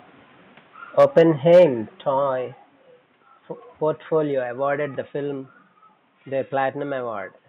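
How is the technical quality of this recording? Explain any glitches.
The recording has two brief distortion bursts and two sudden level drops. Room noise sits about 43 dB below the speech.

Microphone overload at 0.99–1.21 s and 1.53–1.64 s: peaks exceed the converter limit by about 4 dB, likely from excessive input gain. This produces harsh crackle, flat-topped waveform peaks and broadband spectrogram splatter.

Microphone volume stepped down at 1.03 s (about 2 dB) and 2.04 s (about 5 dB): software likely reduced input gain after clipping. Level drops abruptly, showing as a step in the waveform envelope.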